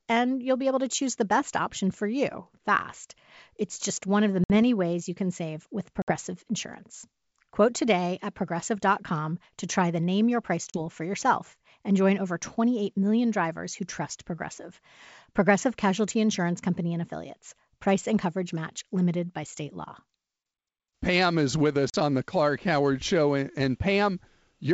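Packet loss on an ADPCM call drops packets at 4.44, 6.02, 10.70 and 21.90 s, leaving hard-edged silences of about 60, 60, 40 and 40 ms; the decoder's predictor and step size are then out of step with the sender's, so the speech returns with brief distortion.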